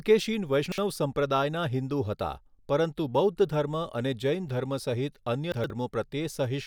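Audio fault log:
0.66–0.78 s, chunks out of order: a 60 ms chunk plays one chunk late, just before "સંપ્રદાયના હિંદુ". Nothing is missing, but the swapped order and three hard joins give a brief jumbled moment.
5.52–5.70 s, chunks out of order: right after "અને જૈન ધર્મ સહિત", a 60 ms chunk lands two chunks late. The shuffled span and its abrupt seams sound garbled.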